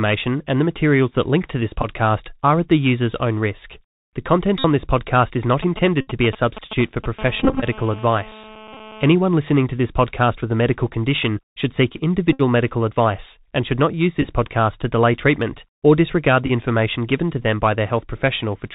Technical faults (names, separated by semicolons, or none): Bluetooth CVSD headset codec; Bluetooth headset packet repeated; GSM signalling bursts; GSM phone buzz